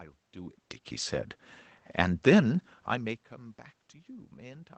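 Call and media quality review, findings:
Nothing stood out on listening to this speech clip that would call for a finding.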